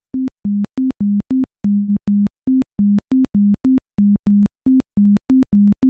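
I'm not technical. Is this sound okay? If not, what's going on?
No, there are two problems. At 1.73 to 1.90 s the sound stalls for about 0.15 s, stretching into a fading buzz or hiss before carrying on exactly where it stopped. That's a call audio freeze, likely from network packets arriving late, so a gap got inserted rather than anything lost.

From 4.18 to 5.80 s you get around fifteen ticks, evenly spaced every 0.125 s (eight a second), audible only while something's sounding. These are periodic USB or driver dropouts: the computer briefly stalls the audio on a timer and skips a minuscule sliver each time.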